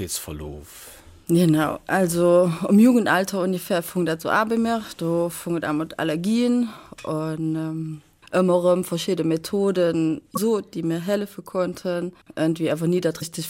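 Damaged data in a compressed stream occurs twice, from 10.33 to 10.38 s and from 13.18 to 13.23 s. Some of the bytes carrying those stretches of the coded audio were corrupt, so the decoder misread the affected frames, lost its lock on the frame structure and had to hunt for the next valid header before it could resume. Each time, the sound is disrupted for about 40 ms before it picks up again.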